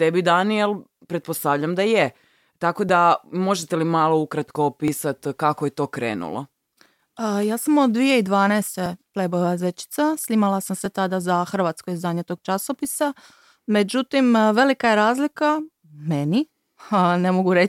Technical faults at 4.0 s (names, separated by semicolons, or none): periodic USB or driver dropouts